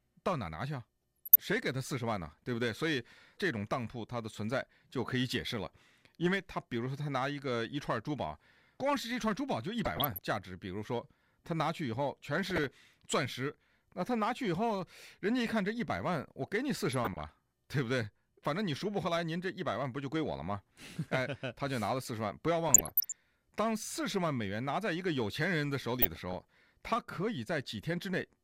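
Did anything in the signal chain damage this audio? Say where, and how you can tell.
Yes. DAB burbling hits the speech at 1.0–1.5, 9.8–10.2, 12.5–12.7, 16.9–17.3, 22.7–23.1 and 26.0–26.3 s. It sounds like short blips of noise and sudden level jumps in the sound. This is damage at the codec stage. Weak reception let bit errors through error correction, so single MP2 sub-bands jump in level.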